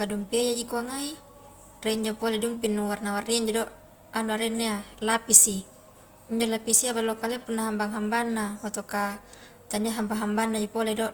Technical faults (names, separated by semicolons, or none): Opus compression